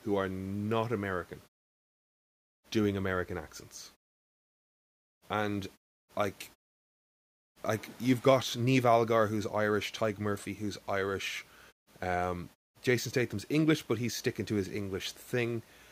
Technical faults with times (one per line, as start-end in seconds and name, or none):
none